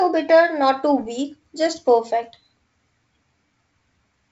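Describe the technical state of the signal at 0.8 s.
At 0.8 s the speech is intact, carried over G.722 wideband telephone coding with its band limit near 7.7 kHz and the light upper-band hiss that coding leaves at 56 kbit/s.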